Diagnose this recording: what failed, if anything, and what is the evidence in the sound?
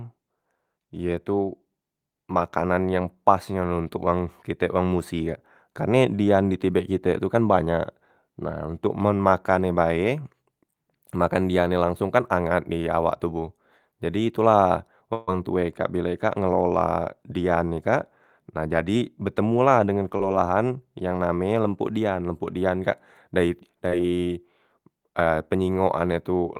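A burst of packet loss at the network stage, from 15.13 to 15.29 s, between "tu la" and "wong tue kak": about 140 ms of audio never arrives. The receiver stretches the last sound into a fading hold instead of silence, and the speech resumes further on with that stretch missing.

Short concealed packet loss, also a network fault, at 20.17 to 20.21 s and 23.89 to 23.94 s. Each gap is about 20 ms, filled by continuing the preceding sound and blending back in. The result is a brief smear or wobble, far shorter than the held, fading burst at 15.1 s.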